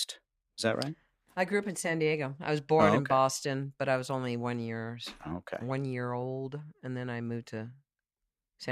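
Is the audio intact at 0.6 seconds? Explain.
Yes, at 0.6 seconds the speech plays through intact, with no dropout, click, distortion or other fault at that point.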